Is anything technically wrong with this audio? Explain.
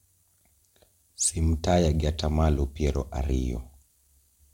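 No, nothing technically wrong is audible in this speech clip.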